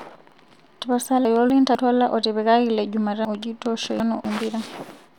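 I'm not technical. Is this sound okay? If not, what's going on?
No. The speech has chunks out of order twice. From 1.25 to 1.75 s, one quarter-second piece plays one step late. From 3.25 to 4.25 s, another plays three steps late. Nothing is missing, but each spot sounds jumbled.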